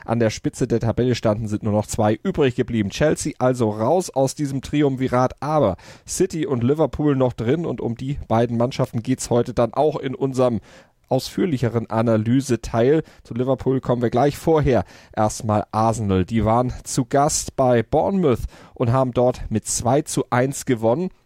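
No technical faults are audible anywhere in the audio.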